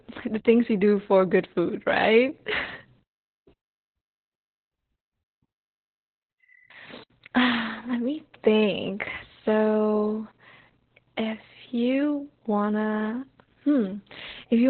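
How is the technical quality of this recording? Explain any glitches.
Poor. Heavy Opus voice compression runs through the whole recording. The speech is squeezed into a narrowband channel with nothing above about 4.2 kHz, and the linear-prediction coder rebuilds each sound from a coarse excitation, which fits a bitrate near 8 kbps. The result is muffled, hoarse and faintly robotic. A plain low-pass filter would only dull the sound, but here the grainy, synthetic roughness inside the remaining band is what marks it as codec damage.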